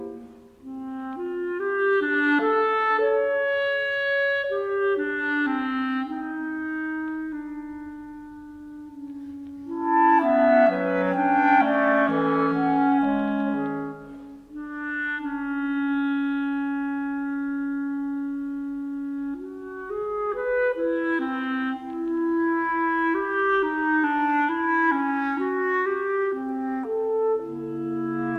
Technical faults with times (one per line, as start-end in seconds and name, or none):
none